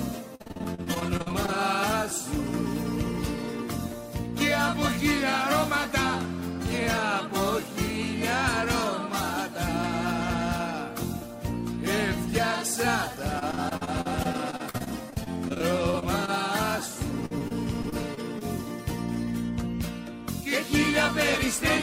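Repeated packet loss (robotic sound) shows up at 0.35–1.50 s, again at 13.39–16.30 s, and at 17.26–18.43 s. Packets kept dropping, each hole, up to about 49 ms, got patched by stretching the last sound, so it goes choppy.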